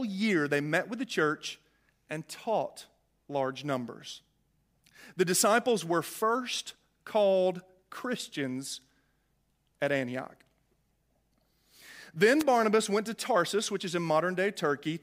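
At 12.39 to 12.43 s the analogue FM radio link from the microphone briefly fades, as reflected copies of the transmitted signal arrive out of step and cancel one another at the receiver. With the carrier that weak, the receiver's own noise rises to the surface, producing a wireless microphone noise hit: a short burst of static, under 50 ms long, before the signal recovers.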